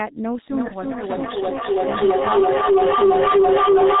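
From the start the speech sounds muffled and hoarse, with smeared consonants and nothing above 4 kHz. That fits the G.723.1 codec at a low bitrate near 6 kbit/s, coding in 30 ms frames with a slowly updated voice model and heavy damage.

At 0.5 s a ringing tone near 400 Hz rises to about 10 dB above the speech, with the loop repeating roughly every 300 ms, and persists to the end. This is feedback howl: a microphone-to-loudspeaker loop with gain above unity, reinforcing the frequency it favours on each trip.

Between 0.68 and 0.78 s the speech is briefly stretched into a fading sound and stays weak or distorted for a moment. This is VoIP packet loss concealed by the speech codec. The gap fits a single lost 30 ms frame, which the decoder filled by extrapolating pitch and filter.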